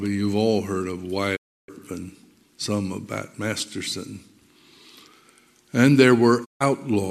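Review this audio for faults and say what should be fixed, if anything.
There are two digital broadcast dropouts: the sound fades out over about 20 ms and goes silent from 1.35 to 1.70 s, then again from 6.44 to 6.62 s. The receiver lost lock or got frames that failed their checks, so it muted until clean frames arrived. That's roughly 312 ms and 144 ms of programme simply gone. To prevent it, improve reception margin with better antenna placement or signal strength, or record from a wired feed.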